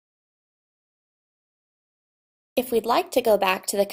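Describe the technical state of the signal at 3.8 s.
At 3.8 s the signal is intact, with no audible fault at that moment.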